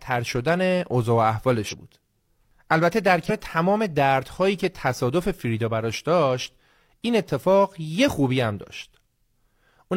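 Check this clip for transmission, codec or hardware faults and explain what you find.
There are two dropouts. Compressed frames were skipped at 1.68–1.74 s and 3.25–3.31 s: a few missing frames make the speech jump ahead by roughly a fifth of a second each time.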